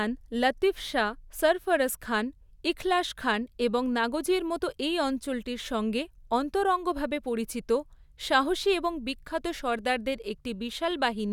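No technical faults are audible.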